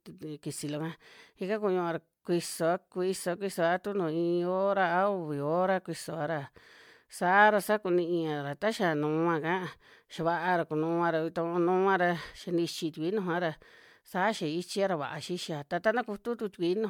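Throughout, the speech sounds swirly, smeared and hollow, with blurred consonant attacks and nothing above 19.9 kHz. It's likely generation loss from about ten repeated 128 kbit/s MP3 encodes.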